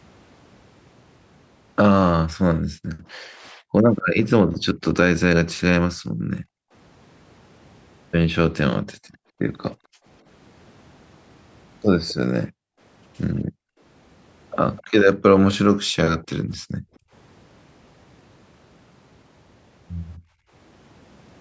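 Between 2.57 and 4.76 s the room background starts ducking, and it happens again at 5.94–6.73, 8.94–10.05, 12.46–13.8, 15.79–17.12 and 20.18–20.51 s. That's background gated by the echo canceller. While the far end played through the loudspeaker, the canceller clamped the mic down by about 40 dB (only about 23 dB in the last one), so the ambience drops out and then pops back.

Around 12.08–12.14 s, and again from 14.76 to 15.54 s, a faint delayed copy of the speech trails behind by about 256 ms, sitting roughly 20–25 dB under the main speech. It's likely an echo leak, where the loudspeaker's sound reached the mic and the canceller didn't fully strip it before sending it back. The first one is just a quick scrap and the second a short stretch. The band tops out around 8 kHz, as the call's mic processing leaves it.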